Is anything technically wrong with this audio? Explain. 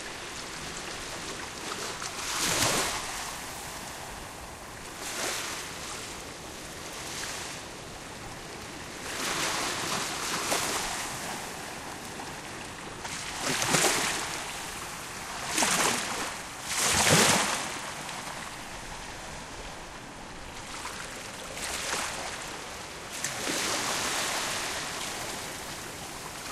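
No, nothing here sounds technically wrong, so this recording of sounds can be enjoyed as it is.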